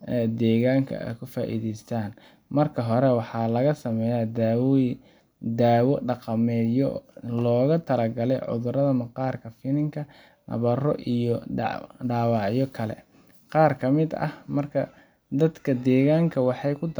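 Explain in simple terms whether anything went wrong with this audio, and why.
Nothing went wrong with this audio; there is no audible problem anywhere in the recording of speech.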